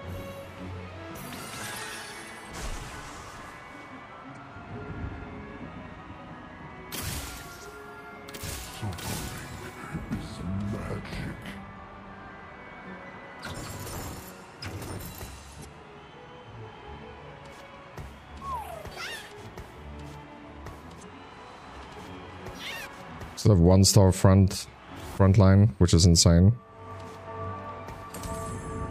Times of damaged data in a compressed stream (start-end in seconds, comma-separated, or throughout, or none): 1.74-1.78, 4.33-4.37, 13.52-13.56, 15.61-15.65, 20.99-21.04